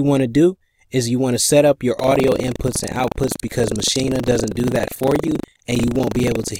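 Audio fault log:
1.96–6.59 s, buffer tearing: from 1.96 s to the end, a steady robotic rattle sits on the sound at 25 Hz, and it appears only where there is signal. The writer and the hardware reader of the ring buffer have drifted out of step and cross inside every 40 ms period. A slice of about 15% of each period replays audio from roughly 70 ms earlier, with hard joins on both sides. The 25 Hz rate points to a 40 ms buffer period.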